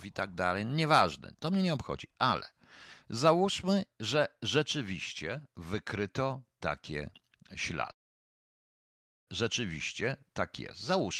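A speech clip with one fault, a long network dropout from 7.91 s to 9.29 s. The last sound before the gap smears into a fading buzz, about 1.3 s of near silence follows, and the speech resumes with about 1.36 s of material gone. This is likely a stalled packet stream that the receiver tried to fill. Unlike a brief packet loss, the fill runs out and leaves silence, and unlike a natural pause, the speech comes back having skipped ahead.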